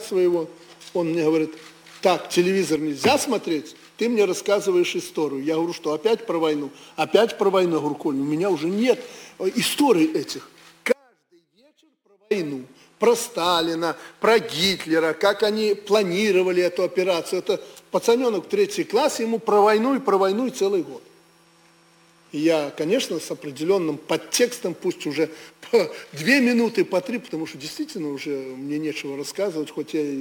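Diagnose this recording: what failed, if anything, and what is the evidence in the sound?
An audio dropout to a faint residue runs from 10.93 s to 12.31 s, about 1.38 s. The sound cuts off abruptly mid-flow and returns just as abruptly, with no fade at either edge. Through the gap only a faint sound remains, roughly 40 dB below the signal's normal level. The likely cause is an intermittent break in the analogue wiring ahead of a path that stayed live.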